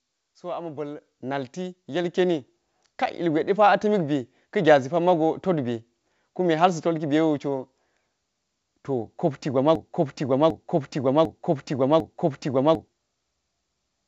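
At 1.02 s the speech and the room behind it jump up together by about 7 dB, then again at 2.04 s by about 5 dB. This is the microphone volume stepped up: the call software judged the input too quiet and raised the device's gain in two quick steps.

From 9.75 s to 12.88 s a piece of speech about 0.75 s long plays four times back to back, identical each pass, while the audio that belonged there never arrives. This broken-record loop is likely from a stall in the player, encoder or stream that kept resending its last fragment. The loop carries the same band-limited sound as the rest of the call, with nothing above 8 kHz, as expected from a G.722 call path.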